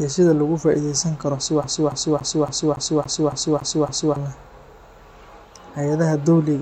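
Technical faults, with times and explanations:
1.64 to 4.16 s, CD stuck on one turn: a scratch keeps knocking the laser back one track at the same point of the disc's rotation, so the player rereads the same stretch instead of moving on. The speech locks into a loop of about 280 ms that repeats nine times, each pass cut off by a brief mute where the pickup jumps. The result is a rapid, perfectly regular stutter, the signature of a skipping CD.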